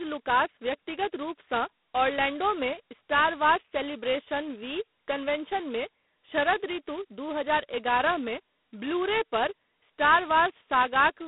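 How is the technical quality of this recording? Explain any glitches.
Technical quality is poor, with one fault running through the whole recording: G.726 ADPCM coding. Instead of storing each sample, the codec sends only the difference from an adaptive prediction, and here it has very few bits to describe that difference. The heavy, rasping hiss points to the 16 kbit/s mode. That coarse quantisation error rides on the speech itself, so the hiss swells and fades with the speech level. The channel is also limited to roughly 200 Hz to 3.6 kHz, with nothing above 3.9 kHz, so the speech sounds thin and muffled.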